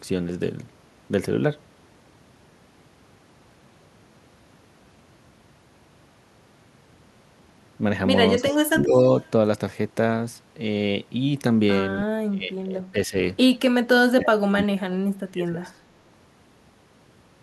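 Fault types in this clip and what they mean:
Speech suppressed in double talk: the speech repeatedly dips by up to about 30 dB in pieces, likely an echo canceller ducking overlapping talk, unlike random dropouts.
Echo leak: a delayed copy of the speech returns 270 ms late, about 15 to 30 dB down, likely uncancelled loudspeaker pickup; it adds sound rather than removing it.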